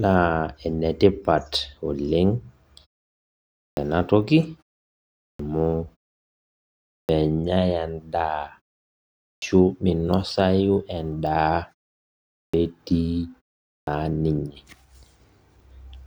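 Speech with a clipped start after a pause, six times: at 3.60, 5.22, 6.93, 9.24, 12.37 and 13.69 s. The output device sleeps through each silence of about 0.4 to 1.1 s and needs roughly 160 to 180 ms to wake, so each phrase begins abruptly with its opening sounds missing.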